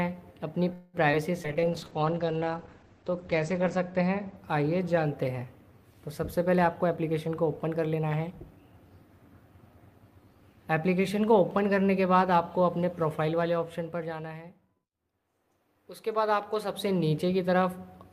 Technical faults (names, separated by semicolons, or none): call audio freeze; skip ahead; call bitrate drop; jitter buffer slow-down; jitter buffer speed-up